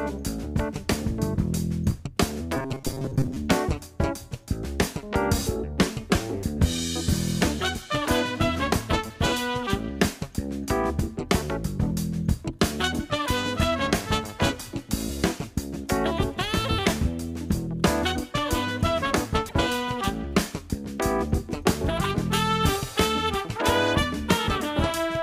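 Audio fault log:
2.57–3.37 s, robotic sound from repeated short buffers: the audio turns into a rigid metallic buzz at 134 Hz, likely from a roughly 7.5 ms chunk being replayed over about half the span. On a spectrogram, evenly spaced horizontal harmonic lines at 134 Hz multiples replace the normal texture.
19.45–19.53 s, damaged data in a compressed stream: a brief glitch lasting about 80 ms, where the decoder misreads corrupted frames and loses sync before recovering. The spectrogram shows a short, sharp-edged disruption that doesn't match the surrounding content.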